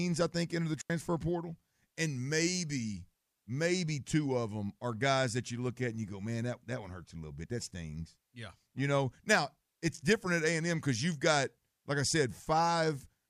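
At 0.81 s the digital wireless link loses too much data and the receiver mutes, leaving a clean 86 ms hole of near silence until 0.90 s, with no noise burst.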